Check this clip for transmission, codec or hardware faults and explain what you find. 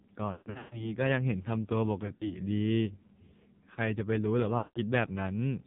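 Two faults can be heard: heavy narrowband mobile coding throughout, and three bursts of lost AMR speech frames.

AMR narrowband mobile codec, whole clip: the speech sounds buzzy, thin and synthetic, with nothing above 4 kHz. The damage is heavy, which points to a low AMR-NB mode, around 5.9 kbps. At that rate the codec rebuilds the voice from a coarse vocal tract model driven by very few pulses per subframe. Fine detail and natural texture are replaced by that artificial buzz.

Lost AMR speech frames, at 0.32 to 0.93 s, 2.06 to 2.37 s and 4.58 to 4.79 s: the voice smears, warbles and sags in level. The first burst is worst. About 340 ms of frames drop across roughly 0.4 s, with a run of up to 140 ms, long enough for the sound to stretch and fade toward silence. The second burst loses about 100 ms spread over 240 ms, with runs up to 60 ms, and sounds like choppy dips. The third loses about 180 ms. 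When frames fail the radio checksum, the decoder repeats the last good pitch and vocal tract settings at falling gain. After each gap the speech returns briefly weak and rough.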